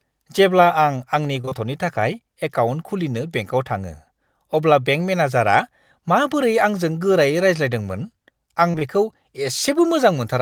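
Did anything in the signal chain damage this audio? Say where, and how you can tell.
Yes. The network stage caused short concealed packet loss in two bursts, at 1.41 to 1.53 s and at 8.71 to 8.83 s. Each burst holds three 20 ms gaps that the receiver filled by extending the preceding sound before crossfading back. The result is a brief smeared wobble where the real signal should be.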